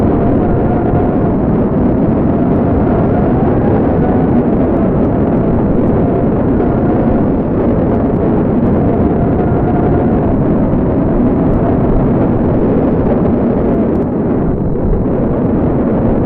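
An everyday sound recording with a recurring Bluetooth SBC bit pool drop. Three times, the top end goes dull and a gritty grain rises: 1.14 to 4.05 s, 6.57 to 8.07 s, and 12.32 to 13.71 s. Each time, the link seems to cut the bit pool sharply. The degradation fits a fall from about 31 to 13, near 94 kbps. High sub-bands then get few bits and the rest are quantised coarsely. Full quality returns after each dip.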